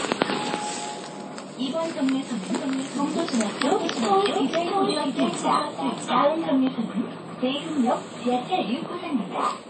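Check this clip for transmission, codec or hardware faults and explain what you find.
Two faults are present: a lossy-codec chain that colours the whole clip, and a doubled audio track in the middle section.

Transcoding between lossy codecs runs throughout. The audio was likely encoded with one lossy codec and then re-encoded with another. The artefacts fit a low-rate MP3 followed by WMA at a similarly low rate, around 32 kbit/s. The second encoder spent its scarce bits reproducing the first one's damage while adding its own. Nothing remains above 8.3 kHz, so the top end sounds dull. Two layers of smeared, swirly coding artefacts are heard stacked on top of each other.

A doubled audio track appears from 2.50 s to 6.54 s. A second copy of the same audio was mixed in, likely because it was captured again through a slower path or because an edit left two copies out of step. That copy trails by roughly 0.7 s and sits around 5 dB below the original. 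It is full-band, with no decay or room colour, so it sounds like a distinct repeat rather than an echo. It starts and stops abruptly at those two times.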